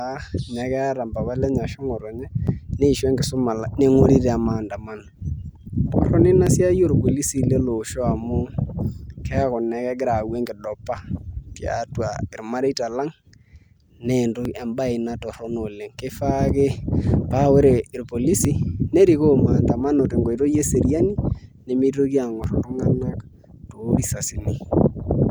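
Speech, with tiny skips at 2.47, 6.47, 10.46, 14.45, 18.45 and 22.44 s, the last just after "eseriani nemitoki". Each drops only a few milliseconds, every 4 s, so it's likely audio missing between chunks as the recorder swaps buffers.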